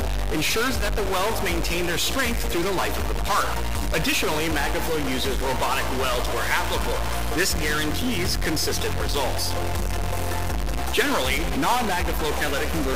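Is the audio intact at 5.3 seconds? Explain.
No. At 5.3 seconds, as across the whole recording, one data bit is likely stuck at a fixed value, probably from a broken line or converter stage. About half the samples are pushed off by that bit's weight, a step of about -20 dBFS, in a pattern that follows the waveform. The result is a harsh, buzzy distortion riding on the sound, and because the error flips with the sign of small values, quiet gaps fill with a fairly loud noise.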